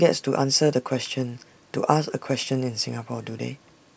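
From 0.72 s to the end, the speech carries a buzz at 100 Hz, the signature of a resampler restarted on every block. Each 10 ms block is converted from 24 kHz to 16 kHz in isolation, so block edges pick up small errors that repeat steadily whenever sound is present.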